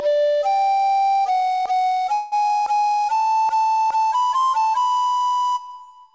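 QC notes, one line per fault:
2.14 to 2.34 s, call audio freeze: the sound stops moving forward and the last instant is stretched into a buzzy or hissy, fading tail lasting about 180 ms. Once the stream resumes it continues exactly where it left off, so nothing is lost and everything after runs about 180 ms late. The likely cause is delayed packets draining the jitter buffer. On a spectrogram this shows as smeared, horizontally frozen bands that dim over the span. The band stays capped at 8 kHz from the call path.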